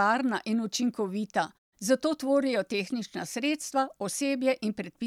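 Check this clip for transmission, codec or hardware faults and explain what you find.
Nothing here points to a transmission, codec or hardware problem, so there's no fault to walk through in this bit of speech.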